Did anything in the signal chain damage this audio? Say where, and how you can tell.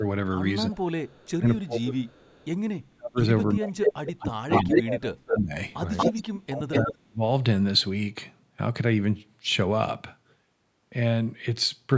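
Yes. Speech suppressed in double talk appears at 0.00 to 0.04 s, 0.67 to 2.06 s, 2.77 to 5.53 s and 6.44 to 7.22 s. The speech dips by about 10, 25, 35 and 40 dB respectively. The stage is call processing: the echo canceller likely could not tell the near talker from loudspeaker echo while both sides spoke, so it attenuated everything, including the wanted speech.

An echo leak, also from call processing, is audible as a delayed copy of the speech at 1.07 to 1.26 s and 2.07 to 2.46 s. It lags by 272 ms and sits about 35 dB below the speech. It returns at 4.2 to 5.39 s and 5.97 to 6.92 s with a 236 ms lag, now about 5 dB louder than the speech and then level with it. The likely cause is a loudspeaker endpoint whose canceller left part of its microphone pickup in the return path.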